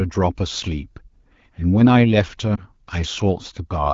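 At 2.56 to 2.63 s, lost AMR speech frames cause a brief dip or warble in the HD Voice speech, consistent with one missing frame, not a silent dropout.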